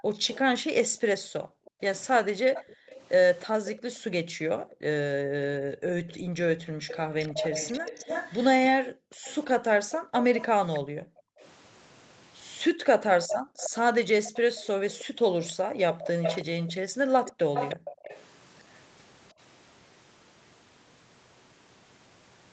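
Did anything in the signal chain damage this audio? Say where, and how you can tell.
Yes. Call processing: background gated by the echo canceller. Room sound drops by about 40 dB in bursts within 0.0–6.84 s, 8.73–11.39 s and 12.73–17.5 s, as suppression clamps the microphone.

Call processing: an echo leak at 0.13–0.38, 1.65–3.78, 6.09–11.47 and 13.28–18.78 s. A 319 ms delayed copy rises from about 20 to about 10 dB below speech, likely from incomplete loudspeaker-echo cancellation.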